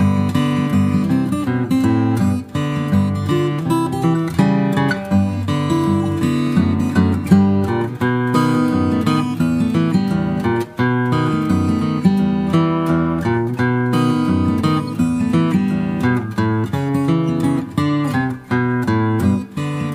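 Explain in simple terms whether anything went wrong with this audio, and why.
Something did go wrong, briefly: at about 14.88 s there's a quick chirpy blip. That's a corrupt frame decoded. A tiny chunk of the compressed audio got scrambled, a few frames' worth by the sound of it, and the player played it anyway, spraying sound into the wrong frequencies.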